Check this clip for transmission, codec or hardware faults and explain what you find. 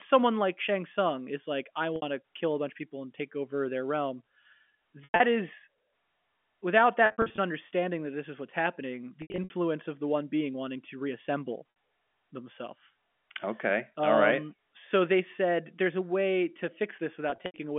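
Packet loss with pitch repetition occurs at 1.96, 5.04, 7.06 (before "understanding that this is"), 9.22 (after "this is what's happening"), 11.70, 15.36 and 17.30 s. The receiver filled 20 to 200 ms of lost audio by repeating the last pitch period, so the sound briefly holds with a buzzy tone. In the longer runs near 5.1 s it fades toward silence.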